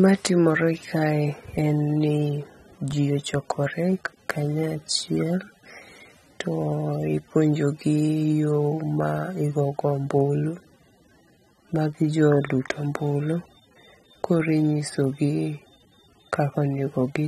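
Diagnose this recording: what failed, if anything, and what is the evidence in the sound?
Codec stage: likely AAC compression at a rate fitting about 32 kbps removes all content above 13.9 kHz throughout, so the speech sounds dull and plainly smeared.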